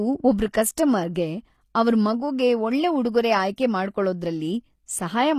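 The whole clip has the marks of HE-AAC compression. The codec likely coded only the lower spectrum and rebuilt the treble from copied lower bands, so speech above the crossover sounds gritty and lispy, nothing sounds above 15 kHz, and the damage is plainly audible, which fits a low bitrate around 24 kbps.

At 3.56 s, just after "ಅವ್ರ್ ಮಗುಗೆ ಒಳ್ಳೆ ಉಡುಗೊರೆ", a sharp attack landed late in a transform block. The quantisation noise sized for that loud moment spread about 19 ms ahead of it, so a short hiss of pre-echo precedes the onset and the attack sounds softened and smeared.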